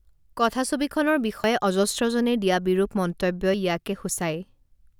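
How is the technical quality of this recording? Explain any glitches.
The recording has two brief glitches in the speech. Both sound like a dropped buffer (overrun). At 1.44 s and again at 3.54 s the speech jumps forward. No silence fills the gap. The likely cause is the software failing to read its input buffer before the hardware overwrote it. Roughly 30 ms of audio seems lost each time, and the two sides are spliced together.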